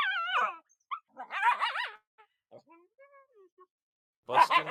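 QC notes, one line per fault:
1.95–2.20 s, call audio freeze: the sound stalls into a fading buzz or hiss, then about 160 ms of silence, 226 ms in all, and resumes where it stopped with nothing lost. Packets were likely delayed and the jitter buffer ran empty, so later audio arrives 226 ms late.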